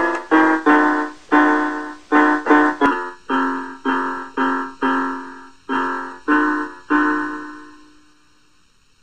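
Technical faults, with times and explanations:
2.86 s to the end: channel delay (comb filtering). One channel lags the other by roughly 0.7 ms before the mono sum, so shared content cancels near 700 Hz and at evenly spaced frequencies above it, giving a hollow, phasey tone. A spectrogram shows fixed dark horizontal bands.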